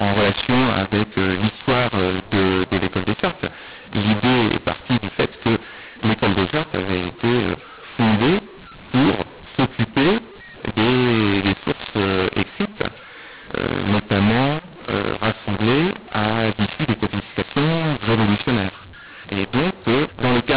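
From start to finish the speech is harsh and distorted. This is mu-law and A-law mixed up. Samples coded with mu-law are read back as A-law, so levels scramble. Pauses fill with noise. The band stops near 4 kHz, which fits 8 kHz telephone coding.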